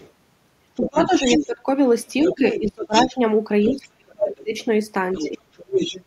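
A faint second voice sits under the start, from 0 to 0.11 s, far below the main speech. This is the other side's voice leaking through, likely because the loudspeaker feed reached the microphone and the echo canceller left some behind. From 0.76 to 1.46 s the leak returns much louder, only a little below the talker. From 0.87 to 1.66 s the talker's voice dips by roughly 15 dB in patches. That is speech suppressed in double talk, likely because the canceller could not tell the near talker from the echo and turned everything down. Leakage comes back at a similar level from 2.08 to 3.1 s. Between 2.33 and 4.53 s the talker is pushed down hard, as much as about 35 dB, for well over a second in total. The other voice runs again from 3.64 to 6.04 s. Inside that stretch, from 5.24 to 5.5 s, the talker drops sharply once more, by around 30 dB.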